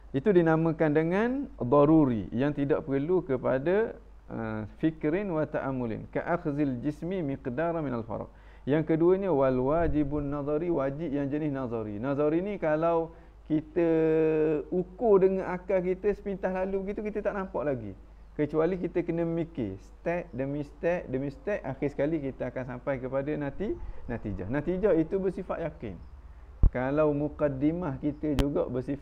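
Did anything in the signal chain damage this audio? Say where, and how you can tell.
Yes: loud pops, likely from a voltage step in the analogue wiring such as a plug or switch, spike about 20 dB above the sound at 26.64–26.67 s and 28.39–28.43 s.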